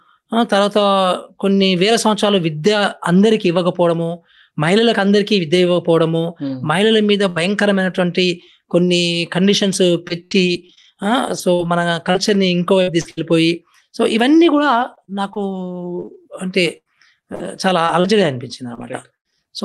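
At 7.29 to 7.38 s there's a burst of packet loss: the last sound gets stretched into a fading hold for about 60 ms, then the audio jumps ahead with a chunk missing. Right at its tail, 7.36 to 7.38 s, and again at 7.44 to 7.46 s and 8.42 to 8.44 s, a lost packet was rebuilt from error correction. The next packet's low-rate copy fills each 20 ms slot, so there's no gap, just a brief rough, grainier patch. From 10.08 to 13.19 s you get repeated packet loss, the robotic sound: 11 quick holes, the longest 74 ms, each papered over by continuing the last sound. It's choppy and robotic, with a few hundred ms patched from error-correction copies. The same repeated packet loss comes back from 14.57 to 19.35 s, this time 14 holes and the longest 98 ms. It sounds stuttery and robotic, with bits dropping out and roughly a fifth of a second rebuilt from those copies.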